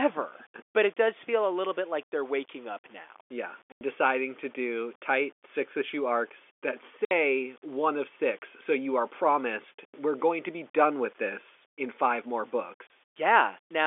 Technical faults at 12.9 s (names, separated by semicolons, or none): low bit depth without dither; packet loss filled with silence